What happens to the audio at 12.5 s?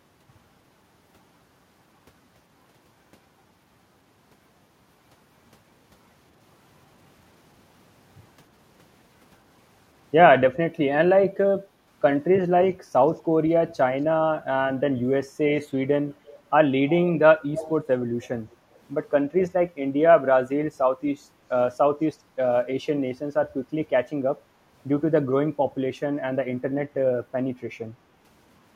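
Nothing goes wrong at 12.5 s; the speech there continues without any dropout, click, distortion or other break.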